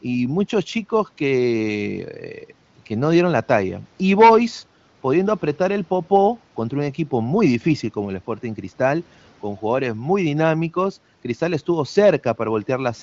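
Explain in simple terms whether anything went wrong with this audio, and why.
Nothing went wrong: the speech comes through an AMR wideband (HD Voice) phone codec, which is why the sound stops at 7.6 kHz, and no fault appears anywhere in the clip.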